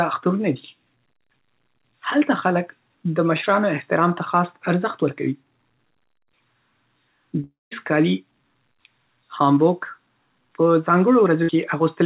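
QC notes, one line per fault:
7.44–7.73 s, long network dropout: sound smears into a fading buzz or hiss, then about 0.19 s of silence, likely a dropout. The spectrogram shows stretched bands, then a blank column.
11.43–11.50 s, burst of packet loss: about 60 ms of audio is lost, and the held sound decays. The waveform shows a repeated, shrinking cycle before the sound resumes abruptly.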